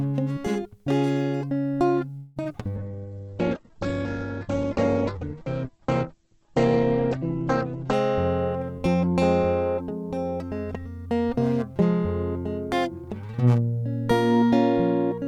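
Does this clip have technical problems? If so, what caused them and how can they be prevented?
Yes. At 2.17–2.38 s the music stalls into a fading buzz for about 0.19 s and then resumes where it stopped, with nothing lost. This is likely a call audio freeze caused by delayed packets emptying the jitter buffer. A waveform shows a decaying smeared stretch. A larger jitter buffer or a steadier network path would prevent it.

At 2.44–2.47 s and 2.49–2.52 s there is short concealed packet loss. Each time, about 20 ms never arrived and was patched by extending the preceding sound. On a spectrogram these appear as brief blurred slivers. Forward error correction or redundancy would prevent them.

From 2.78 to 8.01 s there is a call bitrate drop. The encoder fell from 96 kbps to 9 kbps, which made the music rough and muffled, and the bandwidth shrank from 20 kHz to 8 kHz. A spectrogram shows everything above 8 kHz cut off. 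Better bandwidth estimation and a higher minimum bitrate would prevent it.

At 8.78–9.16 s (122% speed) and 9.77–11.06 s (108% speed) the jitter buffer speed-up removed about a tenth of a second each time. The tempo hurries while the pitch stays the same. Gentler, slower buffer draining would prevent this.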